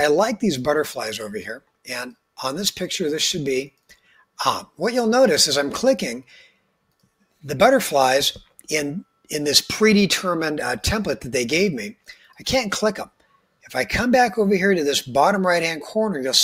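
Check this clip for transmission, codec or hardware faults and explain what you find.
One fault appears twice. Sound cut by the noise suppressor at 3.89–4.23 s and 12.07–12.39 s: mistaken for noise, the sound sinks about 8 and 9 dB for roughly a fifth of a second.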